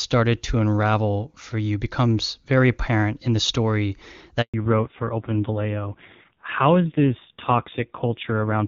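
At 4.42 s the speech cuts out abruptly, fading within a few tens of milliseconds and staying silent until 4.54 s, a hole of about 120 ms. This is a handover gap. The call was passed from one network to another, and during the switch no speech frames arrived. Whatever was said in that window is simply lost rather than muffled, and the audio resumes only once the new link is carrying data.

From 4.54 s to the end, the speech sounds duller, boxier and rougher than the first half. The crisp upper range, which the HD Voice wideband codec carried cleanly before the gap, is gone, with nothing above 4 kHz. This is a fallback to narrowband. After the handover, the call dropped from AMR-WB to the older narrowband AMR codec. The raspy texture points to one of its low rates, around 5.9 kbit/s, rather than a higher narrowband mode.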